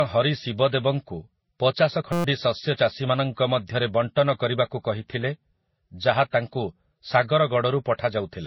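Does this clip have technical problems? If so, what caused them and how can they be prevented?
Yes. The whole speech clip sounds dull and smeared, with nothing above about 5.8 kHz. Sibilants are blunted, and the artefacts of both codecs sit on top of each other. This likely comes from transcoding between lossy codecs, where a low-bitrate MP3 was re-encoded to Vorbis at a similarly low rate. The second encoder spent its bits on the first encoder's damage and added its own artefacts. Prevent this by encoding once, from the original source.

Right after "ଶିବଦେବଙ୍କୁ ପଚାଶ", from 2.13 to 2.24 s, the speech turns into a steady buzz at about 172 Hz. This is a system hang loop. The computer or driver stalled while the sound hardware kept replaying one 5.8 ms piece of its ring buffer, about twenty times over, which fits a 256-sample buffer. Roughly a tenth of a second of real audio is lost. Prevent it by fixing the driver or system stall and using watchdog handling that mutes the output on underrun.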